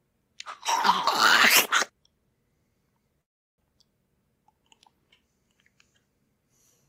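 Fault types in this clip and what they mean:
Call audio freeze: packets likely stalled in transit and the jitter buffer emptied, so at 3.21 s the receiver padded the stream for about 0.37 s, nearly all of it silence, before resuming where it stopped at 3.6 s, losing nothing but running 366 ms later.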